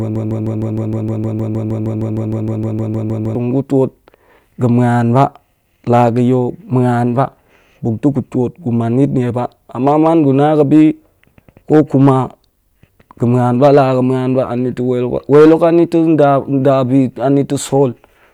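From 0.0 s, already under way, to 3.35 s, a broken-record loop, likely a stalled stream, stutters one 155 ms fragment, tiling identical spectrogram blocks until "gu twot".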